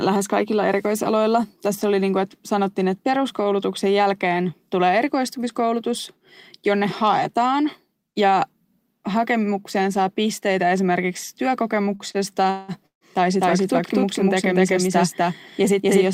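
Repeated stalls (stutter) run from 11.95 to 13.04 s. Packets reached the receiver late, so its jitter buffer emptied four separate times. Each time the receiver held on to the last bit of sound and stretched it to bridge the wait. The longest hold lasts 182 ms. Together the holds fill 397 ms, about 37% of that stretch. Nothing is dropped, but the speech catches and drags in short lurches before it resumes.

A doubled audio track starts abruptly at 13.41 s and continues to the end. A second full-band copy of the speech trails the first by roughly 300 ms at about the same loudness. It has no reverberant tail or room colour, so it sounds like a crisp, detached repeat and not like an echo from a space. The likely cause is the same signal being captured again through a slower path and mixed back in.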